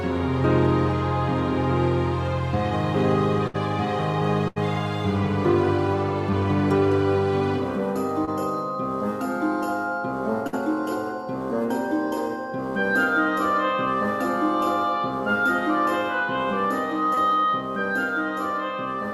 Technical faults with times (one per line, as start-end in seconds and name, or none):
3.47-3.56 burst of packet loss
4.48-4.58 burst of packet loss
8.25-8.29 short concealed packet loss
10.47-10.55 burst of packet loss
17.15-17.19 short concealed packet loss